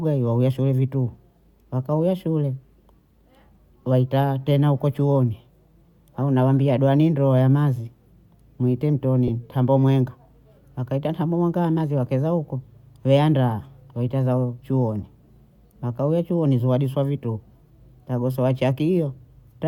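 At 9.28 to 9.30 s, just before "tambo mwenga", the speech briefly turns into a noisy smear, a quick blur where the tone loses its clarity before the sound returns intact. These are lost LE Audio frames. The gap fits a single 10 ms frame that never arrived over Bluetooth. The LC3 decoder filled it by repeating the last spectrum with randomised signs, producing that hissy patch. The codec damage from the normal compression is light.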